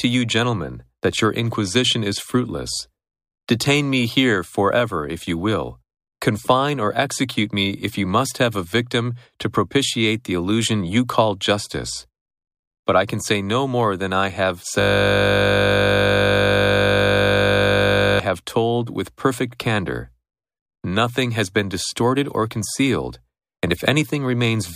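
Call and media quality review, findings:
System hang loop, 14.81–18.20 s: steady 50 Hz buzz from one 20 ms audio slice repeating. Computer or driver froze, ring buffer replayed. Spectrogram shows 50 Hz harmonic comb; waveform shows identical periodic cycles.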